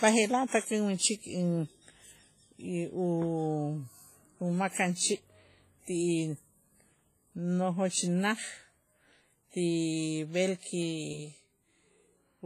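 Across the whole speech clip there is heavy damage that sounds like likely WMA compression at a low bitrate, with a sound consistent with about 24 kbps. Long transform blocks smear quantisation noise over tens of milliseconds, giving a ringing, washy tone and hiss that rises and falls with the speech.

Single sharp clicks occur at 4.73 s, 7.40 s and 10.83 s, each a thin vertical line across the spectrum. These are likely dropped samples. The waveform jumps where a tiny fraction of a millisecond goes missing, which is too brief to remove any sound.

From 11.13 s to the end, a channel delay (doubling) appears. One channel arrives 85.3 ms late, which fits a 4096-sample buffer, and is summed to mono with the other. The late copy is heard as a distinct slap echo at the same level as the direct sound.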